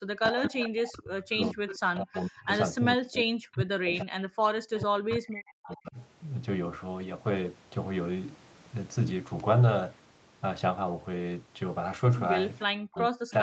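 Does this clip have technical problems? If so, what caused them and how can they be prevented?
Yes. From 0.08 to 5.97 s, and again from 12.68 s to the end, the speech dips and breaks up in pieces, falling by roughly 40 dB at its deepest. This is likely speech suppressed in double talk: with both sides talking, the echo canceller mistook this talker for loudspeaker echo and turned everything down. A canceller with better double-talk detection, or a headset instead of a speaker, would prevent it.

A delayed copy of the voice trails about 0.45 s behind at 0.26–0.69 s, 1.32–2.2 s, 3.97–4.03 s, 4.75–6.05 s and from 12.6 s to the end, about 10 to 25 dB below the speech. This is likely echo leak: the far end's loudspeaker playback reached its microphone and wasn't fully cancelled. Headphones or stronger echo cancellation there would prevent it.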